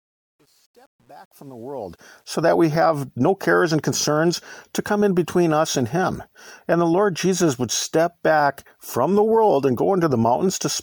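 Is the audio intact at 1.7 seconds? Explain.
No, truncation distortion on a fade runs from 0.0 to 2.42 s, just before "we have no cares", and is worst until 1.81 s. The fade-in keeps too few bits without dither, which fits about 9-bit resolution, so at 1.7 s the quiet sound turns into gritty steps.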